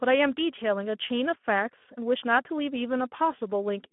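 Speech runs through Speex codec damage from start to finish, and the coding is plainly audible: with few bits left for the excitation, the voice sounds hoarse and grainy. The band sits inside a telephone-style 200 Hz to 3.4 kHz line, with nothing above 3.8 kHz, so there is no upper band at all. That narrow band and the degree of roughness fit a low Speex setting around 11 kbps.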